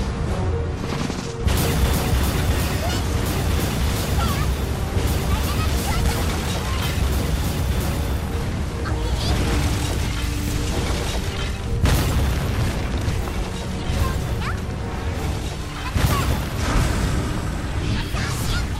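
Small skips at 6.41, 8.89, 11.37, 13.85 and 16.33 s, about every 2.5 s; likely audio missing between chunks, a sliver dropped at each boundary and butted together.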